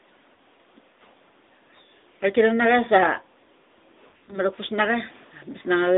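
From the first moment, the speech passes through an AMR narrowband mobile codec, the AMR-NB voice coder used on 2G and 3G calls. The sound is limited to roughly 250 Hz to 3.7 kHz, so it is thin and boxy, with a plainly audible buzzy, synthetic edge; the coding damage fits the 10.2 kbps mode. On a spectrogram, energy stops in a hard ceiling near 3.7 kHz, with empty space above and little below 250 Hz.

At 0.34 s there is a case of lost AMR speech frames. For about 40 ms, which fits two 20 ms frames failing their radio checksum, the decoder fills the gap by repeating its last good pitch and vocal tract settings at lower gain. This is heard as a brief dip or warble. The waveform shows a short sag in amplitude, and the spectrogram shows harmonics smeared flat across the gap.

From 4.08 to 4.39 s, lost AMR speech frames return as a scattered cluster. About 140 ms of audio is missing within a 200 ms stretch, and the longest unbroken run is 60 ms. 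The speech stutters, briefly stretches into a droning, faded tone, and then comes back weak or rough. On the spectrogram this appears as frozen, horizontal harmonic bands that dim, and the waveform shows several uneven dips in level.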